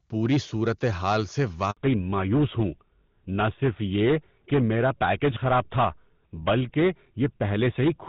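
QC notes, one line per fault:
Throughout: hard clipping. The speech is driven about 12 dB past what a stage can pass, so around a twentieth of samples are cut flat, giving harsh crackle on loud syllables.
1.71 to 1.77 s: handover gap. Speech frames stopped arriving while the call switched networks right after "پوری صورت حال سے", leaving a 60 ms silent hole.
1.77 s to the end: fallback to narrowband. After the handover the call leaves HD Voice for GSM full rate, so nothing above 4 kHz survives and the speech turns duller and rougher.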